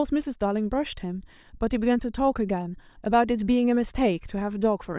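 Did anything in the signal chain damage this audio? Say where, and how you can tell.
No, nothing in the signal chain damaged this audio.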